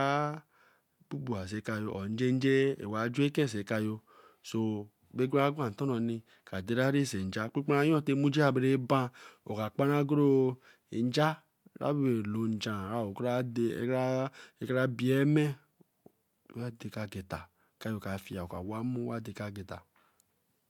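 No technical faults can be heard in the speech recording. Nothing in the audio stands out as a problem at any point.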